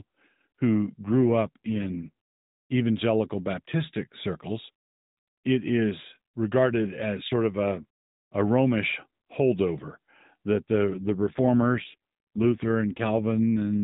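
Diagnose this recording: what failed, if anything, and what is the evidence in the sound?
The fault sits in the codec stage, driven by the network: an AMR rate drop. From 1.03 to 2.08 s, and again from 10.94 s, just after "holdover that", to the end, the speech turns rougher, buzzier and more synthetic. There is no gap and no change in bandwidth. It stays narrowband, with nothing above 4 kHz. The sound fits the link forcing the AMR-NB encoder from 12.2 kbps down to 5.9 kbps, leaving fewer bits to model each frame.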